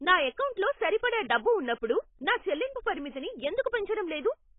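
Throughout, the speech is dull and smeared with a fizzy, warbling texture and nothing above 3.8 kHz, likely heavy AAC compression at a very low bitrate.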